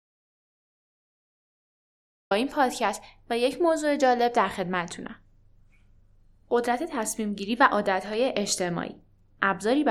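From the very start until 2.31 s there is an audio dropout to silence. The speech begins abruptly mid-flow after silence, with no room tone. The input was likely lost or muted while recording continued, so anything said then is gone.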